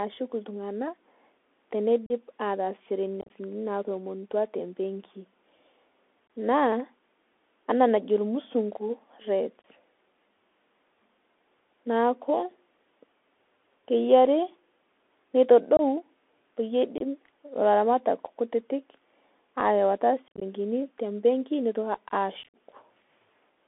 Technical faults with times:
0.00-23.68 Bluetooth CVSD headset codec
2.06-2.12 unconcealed Bluetooth headset packet loss
3.21-3.30 unconcealed Bluetooth headset packet loss
6.27-6.30 unconcealed Bluetooth headset packet loss
9.62-9.64 unconcealed Bluetooth headset packet loss
15.77-15.81 unconcealed Bluetooth headset packet loss
16.98-17.02 unconcealed Bluetooth headset packet loss
20.28-20.42 unconcealed Bluetooth headset packet loss
22.43-22.55 unconcealed Bluetooth headset packet loss

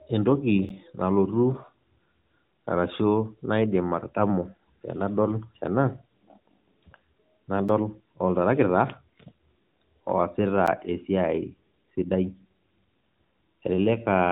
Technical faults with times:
0.69 block of digital silence
7.69 block of digital silence
10.66 block of digital silence

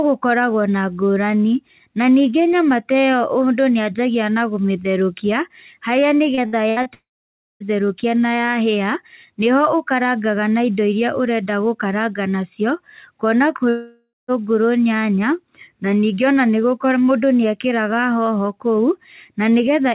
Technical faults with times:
6.35-6.88 repeated packet loss (robotic sound)
6.94-7.63 long network dropout
13.69-14.31 long network dropout

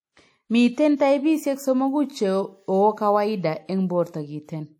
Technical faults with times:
0.00-4.80 WMA compression

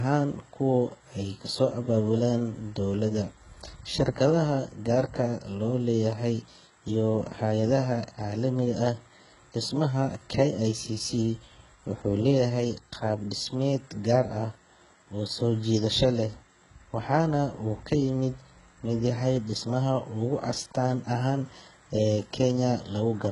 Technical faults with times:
0.00-23.31 low-bitrate audio saved at a high bitrate

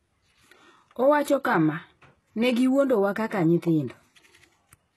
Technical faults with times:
0.00-4.97 HE-AAC compression

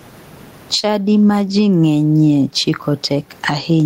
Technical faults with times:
0.00-3.85 gain pumping
0.79-0.85 short concealed packet loss

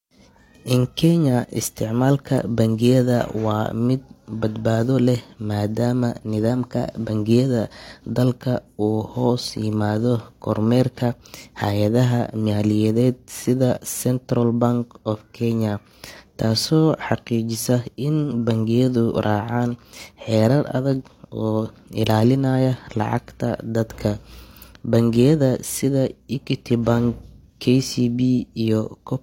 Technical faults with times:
6.50-7.08 drift correction step

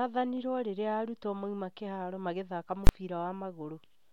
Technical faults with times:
2.87-2.89 invalid numbers at full scale

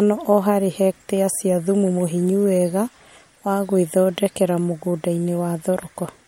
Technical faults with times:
none

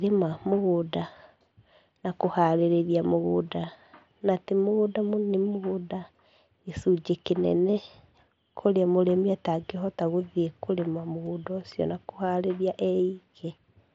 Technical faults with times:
5.53 concealed Bluetooth headset packet loss
11.25 concealed Bluetooth headset packet loss

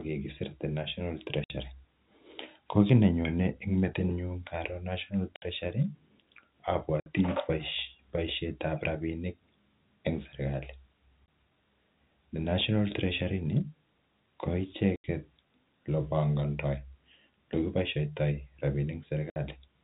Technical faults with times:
1.44-1.50 packet loss filled with silence
5.36-5.42 packet loss filled with silence
7.00-7.06 packet loss filled with silence
11.26 packet loss filled with silence
14.96-15.04 packet loss filled with silence
19.30-19.36 packet loss filled with silence

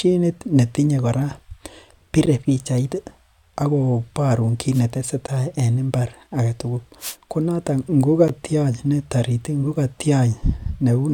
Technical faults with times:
2.26 gap between chunks
4.73-4.81 wireless microphone noise hit
5.27 gap between chunks
6.99-7.16 wireless microphone noise hit
8.28 gap between chunks

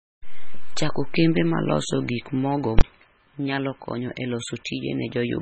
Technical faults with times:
0.00-5.41 MP3 compression
2.79-2.81 invalid numbers at full scale

